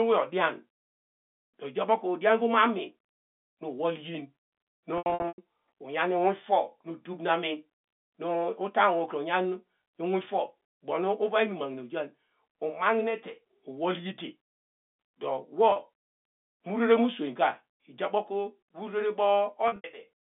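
Packet loss with pitch repetition happens three times. Each time, the receiver fills the gap by repeating the last pitch period and fading it over about 50 ms. At 4.98 s, 280 ms is lost across 400 ms, in runs of up to 100 ms. The sound holds with a buzz, sinks toward silence and cross-fades back by 5.38 s. At 15.72 s, a 40 ms loss leaves a brief held buzz. At 19.68 s, 120 ms is lost over 160 ms, with a longest run of 80 ms.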